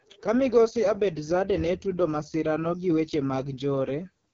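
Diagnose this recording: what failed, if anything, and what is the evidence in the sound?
The codec stage is where it went wrong: the whole clip runs through the AMR wideband (HD Voice) codec at what sounds like its lowest mode, which fits 6.6 kbit/s. The speech comes out rough and raspy from start to finish, and nothing survives above 6.8 kHz. At that rate the pulse-driven vocal tract model has too few bits to track the voice properly, and the top band is just shaped noise filling in.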